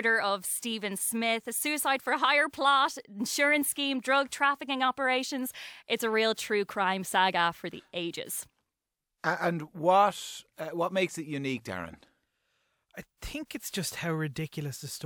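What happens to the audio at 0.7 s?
Nothing goes wrong at 0.7 s; the speech there comes through intact, with no dropout, click or distortion to be heard.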